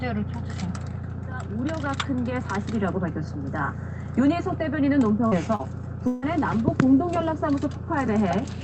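Two short concealed packet losses, at 5.27 to 5.34 s and 5.55 to 5.62 s, each left about 40 ms undelivered. The receiver extended the preceding sound, leaving brief smears. From 6.07 to 6.25 s, a likely long network dropout cut off about 160 ms. The receiver filled it by continuing the last sound as a fading buzz or hiss, with no silent gap, before the audio resumes. Throughout, the call codec's coding noise is present, with nothing heard above 8 kHz.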